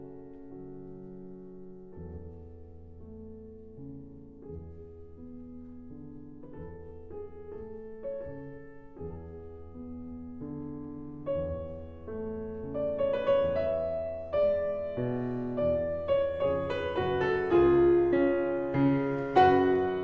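No technical faults can be heard anywhere in the clip.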